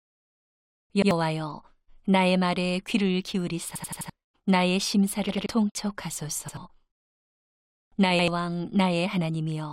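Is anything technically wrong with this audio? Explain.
Yes. Repeated buffers occur at 1.02–1.11 s, 3.76–4.10 s, 5.29–5.46 s, 6.49–6.57 s and 8.19–8.28 s. Audio arrived late, so the same 85 ms chunk replayed with hard joins, which fits a 4096-sample buffer. It plays once extra at most points, four extra times at 3.76 s and two at 5.29 s. Unlike a dropout, which leaves silence, each stutter repeats sound, and a tenth to a third of a second of audio goes missing.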